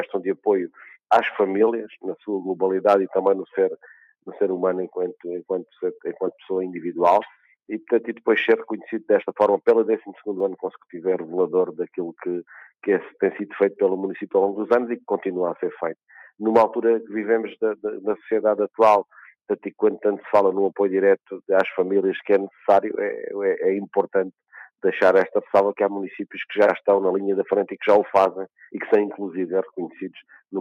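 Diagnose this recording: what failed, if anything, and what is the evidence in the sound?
Nothing failed in this recording, and the sound gives no evidence of a fault at any stage.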